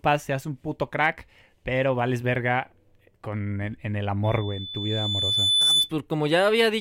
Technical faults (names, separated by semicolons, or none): loudspeaker feedback squeal